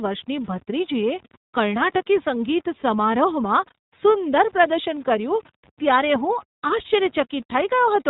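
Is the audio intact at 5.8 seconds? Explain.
No. Lost iLBC frames affect 5.75 to 5.79 s, which fits a short burst of dropped 20 ms frames. The decoder fills the gap by repeating the last pitch cycle blended with noise, so the speech briefly turns into a held, slightly buzzy, breathy vowel. Because each iLBC frame decodes on its own, the speech returns cleanly right after.

The moment also carries the iLBC codec's constant damage, which fits its 15.2 kbps, 20 ms frame mode. Nothing above 4 kHz survives, and its coding of the excitation gives the speech a plainly audible rough, synthetic edge.

Grainy distortion sits under everything, following the level of the speech and sitting roughly 30 dB below it. The likely cause is low bit depth without dither, with samples rounded to about 7 bits, so the rounding error tracks the signal instead of forming a steady hiss.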